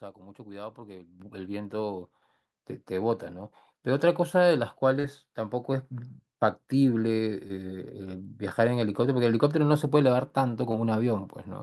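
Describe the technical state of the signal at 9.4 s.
At 9.4 s the speech signal is intact, with no audible fault at that moment.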